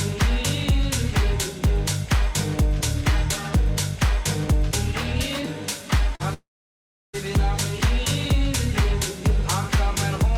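The audio has two network-related gaps close together. From 6.15 to 6.22 s comes a short concealed packet loss: about 40 ms of audio never arrived, and the decoder bridged it by extending the preceding sound for 42 ms before blending back in. It is heard only as a brief smear or wobble with no silence, which separates it from a true dropout. Barely a tenth of a second later, from 6.34 to 7.15 s, a long network dropout takes out about 0.8 s. The sound carries on briefly as a fading buzz or hiss, then goes silent for about 0.67 s before returning, and that silent stretch marks the difference from short concealment. Because the receiver had nothing real to work from for that span, the most likely cause is a stall in packet delivery, and the audio resumes further on without the lost portion.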